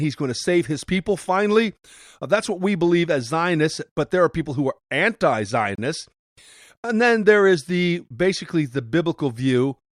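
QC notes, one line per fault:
5.75–5.78 s, gap between stream segments: the speech drops to digital silence for about 28 ms, then resumes exactly where it left off, so nothing is lost, but the timeline is pushed back by that amount. Two consecutive segments don't quite meet, which fits a segment length of about 6 s, and the player pads the hole with silence. On a waveform it's a flat-line notch with abrupt edges. A spectrogram shows a thin, fully blank vertical stripe across all frequencies.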